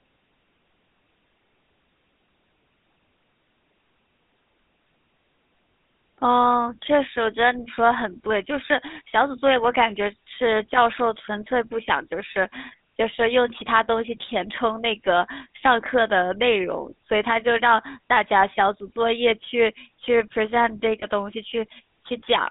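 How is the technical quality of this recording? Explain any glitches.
The recording has been through a narrowband GSM voice channel, with plainly audible codec damage throughout and one brief dropout near the end.

GSM full-rate codec, throughout: the codec rebuilds speech from a vocal-tract filter fed by coarsely spaced pulses, at a rate that fits 13 kbps. The line passes only about 150 Hz to 3.7 kHz, so the speech sounds thin, buzzy and gravelly.

Lost GSM frames, 21.0 to 21.06 s: a missing stretch, consistent with a single 20 ms frame, was patched by repeating the previous frame's settings. The speech briefly hangs on a rough, metallic ring before resuming.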